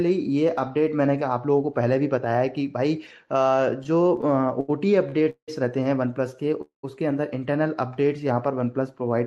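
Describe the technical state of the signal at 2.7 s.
At 2.7 s the signal is intact with no fault, apart from the ordinary character of the WebRTC call path it passed through, whose Opus coding limits the top end to around 12 kHz.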